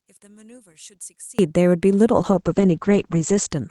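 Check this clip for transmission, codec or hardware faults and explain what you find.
Two faults stand out in this speech recording: a collapse in level at the start, and a later stretch of coarse, band-limited coding.

From 0.0 to 1.39 s the speech sinks by about 29 dB and turns faint. This is most likely one channel inverted: with one stereo side in reversed polarity, the shared centre content cancels when the two are summed to mono, leaving only their small differences. On a waveform the envelope shrinks to a sliver; a spectrogram shows faint energy.

From 2.18 to 3.55 s a call bitrate drop degrades the sound. After the bandwidth estimate fell, the encoder had to work with far fewer bits, and the sound points to a fall from around 48 kbps to roughly 10 kbps, held at its lowest for about 1.26 s. Quantisation grows coarse and the audio band shrinks from 20 kHz to 8 kHz, so the voice sounds muffled and watery. 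A spectrogram shows a hard ceiling at 8 kHz and smeared, blotchy detail below it.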